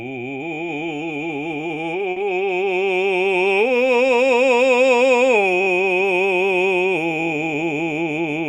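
At 2.11 to 2.18 s the music briefly hangs, one sound held unnaturally long with a faint buzz or dip, then carries on with nothing skipped. It is a short stall from a late packet: the jitter buffer emptied, the receiver stretched the audio for about 50 ms, and playback resumed 50 ms later.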